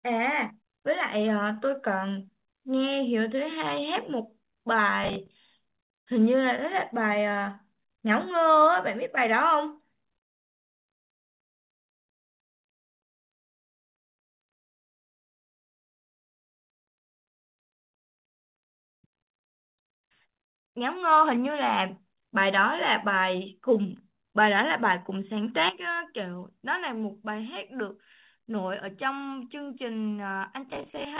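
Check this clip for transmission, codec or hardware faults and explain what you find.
Four kinds of fault are audible, all typical of a real-time call chain. The audio is band-limited to nothing above 4 kHz, which fits a G.711 mu-law call codec.

Processor overload crackle, 5.04–5.97 s and 30.69–31.19 s: the processor repeatedly misses deadlines for buffers of around 10 ms. Each miss replays stale audio with hard edges, giving a gritty crackle.

Call audio freeze, 14.89–16.56 s: the sound stops for nearly 1.7 s of silence, then resumes where it left off, with nothing lost. The likely cause is delayed packets draining the jitter buffer.

Burst of packet loss, 17.42–17.57 s: a 0.14 s gap, almost entirely silence, replaces lost packets. Speech resumes about 0.8 s further on, so that stretch is missing.

Jitter buffer speed-up, 17.66–22.62 s at 119% and 23.06–23.94 s at 106%: the receiver trims pitch-period slices to shed excess delay. 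Speech sounds hurried at unchanged pitch.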